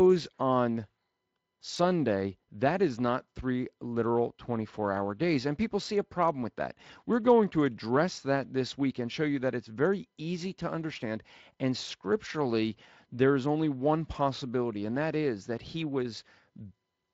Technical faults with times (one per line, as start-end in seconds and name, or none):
none